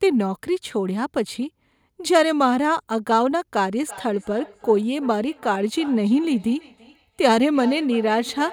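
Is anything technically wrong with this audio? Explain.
Yes. From 3.86 s to the end there is feedback echo between two devices: a second device in the room plays the call back, its sound reaches this microphone, and the echo canceller ignores it because it only removes its own device's playback. Speech returns roughly a third of a second later, thinner and ringing, peaking about 18 dB below the speech. On a waveform, faint copies trail each burst at that spacing; a spectrogram shows fainter, narrower duplicates of each syllable.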